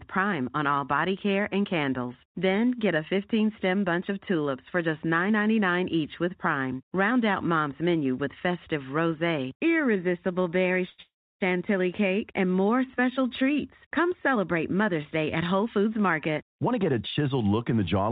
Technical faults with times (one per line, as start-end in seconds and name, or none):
9.54-11.00 repeated stalls (stutter)
11.02-11.42 call audio freeze
14.74-18.11 jitter buffer speed-up